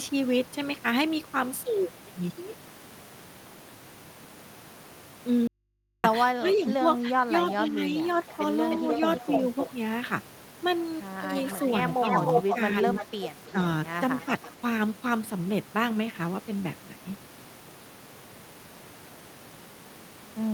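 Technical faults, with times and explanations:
5.47–6.04 s, audio dropout to a faint residue: The speech cuts off abruptly and about 0.56 s of it is simply gone. In its place is only a low mains hum, roughly 50 dB below the speech level, before the voice snaps back mid-flow. The likely cause is a break in the signal upstream while the input after it stayed open, so the hum of the live line is all that remains.
6.38–6.69 s and 7.66–7.97 s, speech suppressed in double talk: In each of these roughly 0.3 s stretches, the talker's voice sinks by up to about 10 dB and sounds pushed back. The likely cause is that both sides were talking at once. The echo canceller could not tell this talker apart from the loudspeaker echo, so it turned everything down together.
8.28–8.37 s, 8.71–9.70 s, 11.37–13.51 s and 14.20–14.52 s, echo leak: A delayed second copy of the voice trails the speech. It lags by 306 ms in the first two stretches and 334 ms in the last two. 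At 8.28 s and 14.20 s it is only a faint scrap, about 20 dB down. Across 8.71–9.70 s and 11.37–13.51 s it is roughly as loud as the speech itself. This is likely the far end's loudspeaker output getting past its echo canceller and being sent back.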